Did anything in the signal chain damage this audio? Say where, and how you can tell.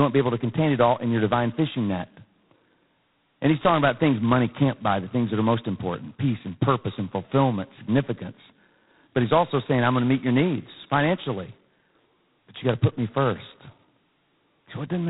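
Yes, at the codec stage. The speech has been through G.726 ADPCM, and the damage runs through the whole clip. Nothing passes above 3.9 kHz, so the top end is gone. A harsh, rasping hiss rides on the speech and rises and falls with its level. That heavy grain points to the lowest 16 kbit/s mode. Each sample keeps only two bits of difference from an adaptive prediction, so the quantisation error tracks the signal.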